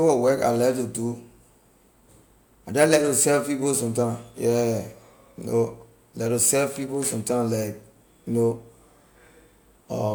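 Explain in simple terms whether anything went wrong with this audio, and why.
Nothing went wrong here; the speech comes across steady and unbroken, with no glitches, dropouts or odd noises anywhere.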